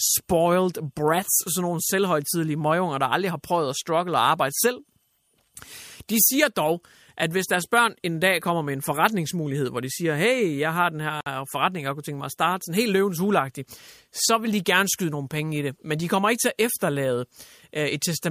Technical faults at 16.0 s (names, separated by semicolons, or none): none